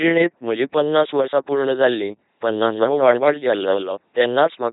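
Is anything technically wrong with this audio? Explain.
Yes. Throughout, the speech has the heavy buzzing, robotic quality of an LPC-10 vocoder, with nothing above 3.8 kHz, consistent with 2.4 kbit/s coding. Each moment is rendered as pure pulse buzz or pure hiss, unlike the smeared artefacts of ordinary lossy codecs.

From 2.61 to 3.99 s, a doubled audio track appears: a somewhat quieter copy trails about a fifth of a second behind, likely from a second, slower capture path. Unlike echo, it has no decay and cuts in and out abruptly.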